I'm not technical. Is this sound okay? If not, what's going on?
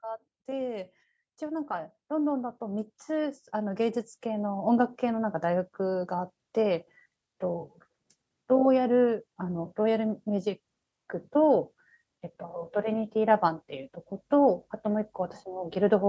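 No, not quite. From about 0.45 to 6.39 seconds there's automatic gain rising: the call's volume control decided the speech was too quiet and slowly turned itself up. You hear the voice and the background swell together over those six seconds, getting noticeably louder, rather than jumping at once. The thin, slightly muffled call quality is just the normal call microphone processing.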